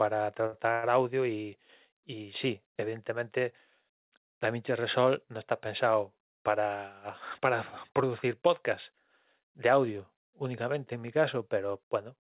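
A speech recording carried over a call link, whose band stops at 4 kHz (consistent with a G.711 mu-law codec at 64 kbps), shows three timing faults. At 0.46 to 0.54 s a packet arrived late, so the jitter buffer ran dry and the receiver had nothing new to play. It covered the wait by extending the last sound for 63 ms, then resumed exactly where it left off. This short stall from a late packet sounds like a brief held sound with a faint buzzy texture, and none of the speech is lost. At 0.72 to 0.85 s the sound stops moving forward and is carried on as a fading buzz for 104 ms, never dropping to silence, before the speech continues from the point where it froze. The likely cause is a call audio freeze: packets held up in transit emptied the buffer, and the receiver filled the gap until they arrived. Nothing is cut, but the line gains 104 ms of extra delay. From 7.92 to 8.48 s the jitter buffer was holding more audio than its target, as happens when delayed packets land together, so it performed a jitter buffer speed-up to shrink the backlog. 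It trimmed about 40 ms in small pitch-period slices, one after another. The speech therefore runs at roughly 106 percent of normal speed with its pitch unchanged, giving that stretch a slightly rushed delivery.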